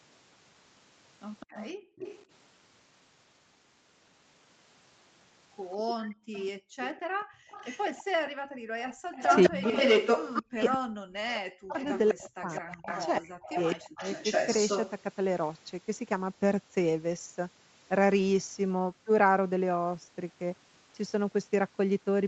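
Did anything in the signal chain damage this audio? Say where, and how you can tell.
Yes, in the call processing stage. An echo leak shows up from 1.4 to 2.25 s and again from 5.89 to 15.01 s: a second copy of the speech trails the original by 207 ms, faint at first, roughly 15 dB down, then only about 5 dB below the talker in the longer stretch. That is likely a loudspeaker on the far end whose echo canceller failed to subtract what its microphone picked up, so the leftover was sent back.

Background gated by the echo canceller is audible at 1.74 to 1.97 s and across 6.01 to 9.12 s. The room sound falls away by about 40 dB, for around a fifth of a second in the first case and roughly one and a half seconds in total in the second. This happens because the canceller clamps the microphone while its loudspeaker is playing and opens it again when playback stops.

Speech suppressed in double talk runs from 9.49 to 14.03 s, overlapping the heavy echo. 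The talker's voice sinks by roughly 40 dB in pieces, about two seconds in all. The likely cause is that both sides spoke at once and the canceller, unable to separate its own talker from the echo, turned everything down together. The 8 kHz ceiling from the Opus call path is normal for this route.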